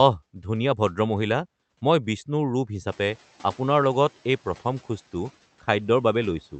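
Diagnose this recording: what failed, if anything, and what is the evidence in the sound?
The noise suppressor in the call processing fell behind when the room noise jumped by about 17 dB around 3 s. Its noise estimate still reflected the quieter level, so from 2.87 s the louder background passes with too little reduction. Over the next 290 ms, to 3.16 s, the estimate catches up and the noise sinks by about 5 dB, an audible swell-then-settle in the background beneath the speech, which is carried through the 8 kHz band-limited call path.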